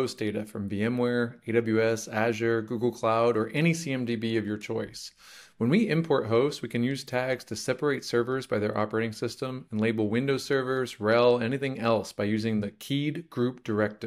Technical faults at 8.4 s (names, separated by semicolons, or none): none